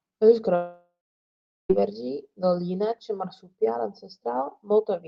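From 0.55 to 1.71 s the speech drops out, likely a long network dropout where packets stopped arriving for over a second. The receiver stretches the last sound into a fading buzz, then about 0.74 s of near-silence follows before speech resumes with the gap lost.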